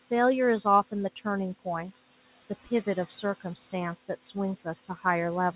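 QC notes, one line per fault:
Throughout: noise suppressor artifacts. The suppressor lowers every band it judges to be steady noise by about 15 dB, frame by frame. The room noise, sitting about 17 dB under the speech, sinks in pauses and rises beneath it.
3.4–3.73 s, 3.99–4.35 s, 4.56–5.05 s: speech cut by the noise suppressor. The suppressor mistook parts of the speech for noise and pulled them down by about 11, 13 and 12 dB, for roughly a tenth to a fifth of a second each, so those stretches sound swallowed and faint.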